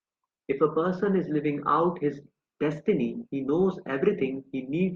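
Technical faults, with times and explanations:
No technical faults are present in this speech clip.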